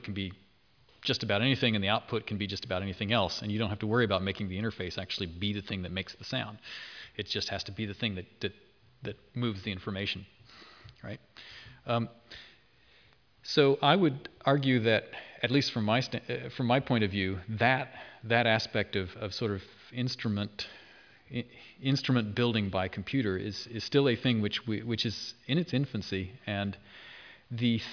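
Nothing in the recording stood out as a technical problem on listening.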